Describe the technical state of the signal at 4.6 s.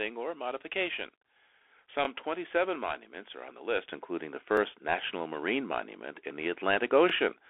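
Right around 4.57 to 4.60 s, between "including the" and "national marine monument in", there's an overlapping chunks fault: the next block starts about 23 ms before the previous one finished, so that sliver plays twice and you hear a quick click-stutter. The spacing fits chunks of 2.5 s.

Underneath that, the whole signal is going through the Bluetooth CVSD headset codec. At 64 kbps, each sample is a single up-or-down bit with an adaptive step, and nothing gets through above 3.8 kHz. You can plainly hear the damage here: scratchy sibilants and a grainy hiss riding under the speech.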